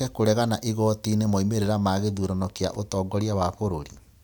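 No technical faults are audible.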